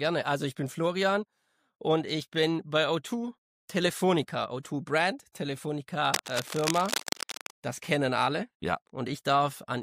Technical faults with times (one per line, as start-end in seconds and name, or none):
6.14-7.51 cable scratch noise